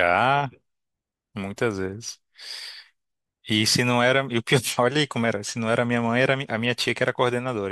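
No technical faults can be heard anywhere in the speech. There is nothing in the audio that needs a time mark or a repair.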